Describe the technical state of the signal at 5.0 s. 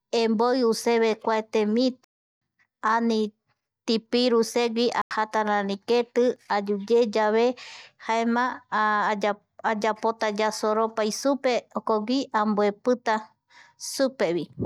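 At 5.0 s the speech, right after "tipiru segui", cuts to a block of digital silence lasting about 93 ms, which fits a 4096-sample buffer left unfilled. It resumes at "rari keti ayuyeyave". Unlike a faded dropout, the edges are abrupt, cutting out and back in with no fade around the short hole.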